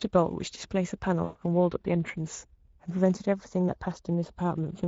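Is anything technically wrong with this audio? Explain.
Yes, there are two faults.

Speex codec damage runs throughout the speech. This CELP coder models the voice with too few bits for the excitation signal, so the voice sounds noisy and hoarse with plainly audible coding damage, which fits a bitrate near 16.8 kbps.

VoIP packet loss concealed by the speech codec occurs from 1.23 to 1.37 s. About 120 ms of packets went missing, which fits six 20 ms frames. The decoder extended its last pitch and filter at falling gain, so the voice smears into a fading buzzy tone or coloured noise.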